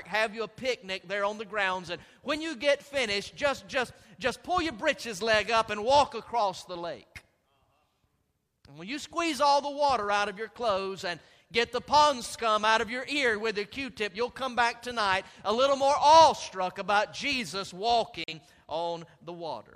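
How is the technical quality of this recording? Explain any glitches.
There's one glitch, right near the end: a digital broadcast dropout at 18.24 s, with the sound gone until about 18.33 s. The receiver briefly lost good data, probably frames that failed their error check, and muted rather than play garbage. About 43 ms of programme simply never arrives, which fits a single lost frame. You hear a quick, clean hole where the audio cuts to silence and then picks up again slightly further along.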